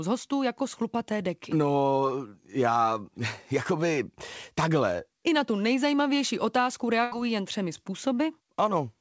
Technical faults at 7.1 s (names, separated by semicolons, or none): burst of packet loss